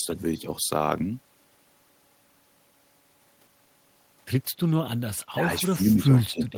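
Speech with speech suppressed in double talk from 5.26 to 6.57 s: an echo canceller likely treated overlapping talk as echo, pulling the talker down by around 20 dB at worst.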